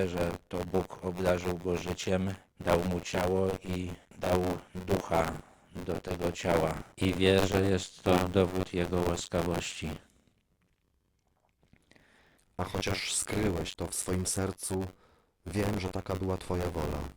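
From start to finish, the speech carries a robotic, rattling buzz at 93.8 Hz that rides along with the sound and drops away in the gaps. This is buffer tearing. The program filling the ring buffer and the hardware reading it have slipped, so their positions cross inside every period. Roughly a sixth of each buffer plays audio from around 30 ms earlier, with hard joins on both sides. That buzz rate fits a 512-sample buffer.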